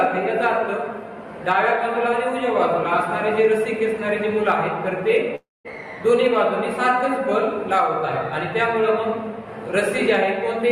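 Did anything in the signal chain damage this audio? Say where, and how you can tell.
Yes, there's a long network dropout from 5.35 to 5.68 s. At 5.35 s the last bit of sound gets stretched into a fading buzzy hiss for roughly 0.3 s, then it goes quiet until the audio picks up again at 5.68 s, with about 300 ms simply gone rather than delayed. That's the receiver concealing a stretch where no packets arrived, so the likely culprit is the network leg, not capture or playback.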